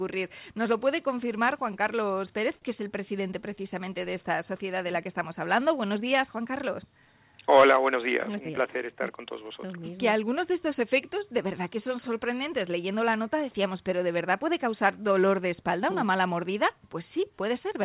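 From 2.56 to 2.64 s, a sound is held about 56 ms too long with a slight buzz or dip. This is a short stall from a late packet: the jitter buffer ran empty, so the receiver stretched the last sound and resumed where it left off.

From 7.95 to 8.50 s, the audio briefly runs hurried at unchanged pitch, about 8% fast. This is a jitter buffer speed-up: repeated pitch-period cuts trimmed around 50 ms of excess buffered delay.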